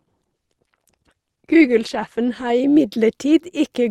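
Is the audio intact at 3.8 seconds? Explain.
Yes, the audio is intact at 3.8 seconds, with no audible fault at that moment.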